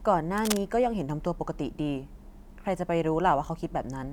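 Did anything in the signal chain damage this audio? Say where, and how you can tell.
Yes. The analogue wiring was disturbed, likely a worn cable or connector being moved, so its contact resistance jumped about erratically. From 0.37 to 0.57 s this puts dense, uneven bursts of cable scratch noise over the speech, heard as brief scratching nearly as loud as the speech itself.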